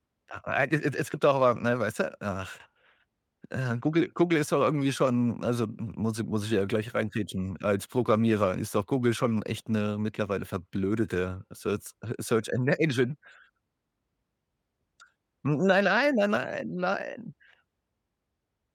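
Nothing technical goes wrong anywhere in this bit of speech, so there's simply no fault to walk through here.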